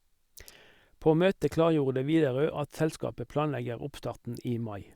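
Listening to this short speech recording, nothing stood out as a technical problem anywhere in it.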